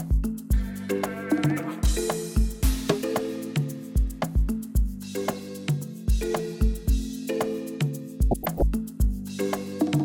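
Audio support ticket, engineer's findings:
DAB burbling, 5.21–5.38 s and 8.31–8.62 s. Weak reception lets bit errors slip past error correction into the MP2 frames, corrupting sub-band samples and scale factors. Single bands jump in level for up to a frame. The result is short noise blips in single sub-bands, and the second burst runs longer.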